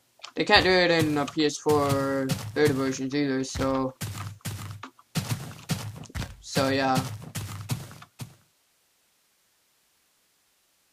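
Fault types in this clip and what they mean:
Nothing stood out on listening, and the level simply eases down toward the end as a deliberate fade-out.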